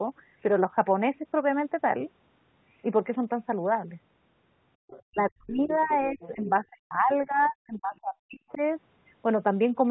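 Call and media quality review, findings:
Other side's voice leaking through: faint second voice at 4.88–5.03 s, 5.66–5.96 s, 6.21–6.50 s and 8.49–8.57 s. Likely residual echo the echo canceller missed from loudspeaker playback. Mostly around 25 to 30 dB under the talker, louder near 6.2–6.5 s at roughly 15 dB down. On a spectrogram, weak separate harmonic stacks between or under the main speech. In the waveform, low-level bursts that don't follow the talker's envelope.

Speech suppressed in double talk: talker's level dips at 5.08–5.91 s, 6.08–7.10 s and 7.26–8.60 s, while the far side is active. Likely echo canceller treating both voices as echo and ducking everything. Deepest drops around 40 dB, roughly half a second to a second of audio affected in each stretch. Waveform shows notches and gated gaps in the envelope. Spectrogram shows energy fading out in those spans.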